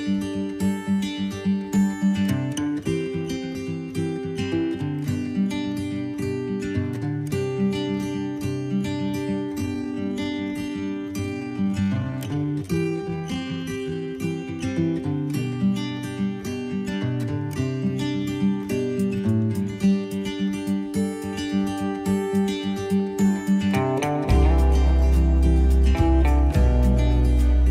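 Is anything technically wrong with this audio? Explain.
Yes. A time-stretched section runs from 9.5 to 14.08 s, where the pace abruptly slows to 0.72 times normal while pitch stays put. This is likely software lengthening the passage by repeating short pieces, which makes the passage drag.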